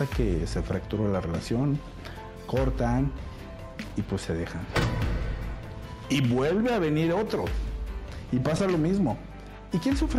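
Two 20 ms chunks of audio arrived one slot late and were played after the chunk that should have followed them, a case of chunks out of order, at 3.88 to 3.92 s and again at 8.56 to 8.60 s. Nothing goes missing, but each swap puts three abrupt joins into about 40 ms of sound, so both spots come across as a brief jumbled stutter.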